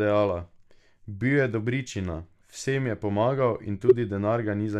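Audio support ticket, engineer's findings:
Corrupt frame decoded: codec frame with flipped bits played without concealment, likely in the transmission or storage path. Roughly one frame affected, 3.88–3.93 s, right after "je pomagal in". Misread gains and codes put energy at wrong frequencies, heard as a fairly loud burst of wrong-frequency energy peaking around -10 dBFS.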